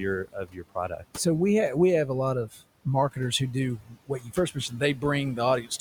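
Right from the start you can hear noise suppressor artifacts. The room noise, sitting about 18 dB under the speech, gets pulled down by about 19 dB in the gaps and then comes back up under the talking.

The same processor also produces speech cut by the noise suppressor. It mistakes quieter parts of the voice for noise and turns them down with the background. The first case runs from 0.25 to 1.04 s, just before "so we have we", with drops of up to about 17 dB, so that lead-in sounds faint and swallowed. There's a short dip of about 10 dB between 2.51 and 2.62 s, between "we have a lot" and "marketers who do". Right after "marketers who do" comes the deepest one, at about 19 dB from 3.79 to 4.37 s. Two more follow, at 4.54 to 5.03 s (about 14 dB) and 5.62 to 5.71 s (about 13 dB).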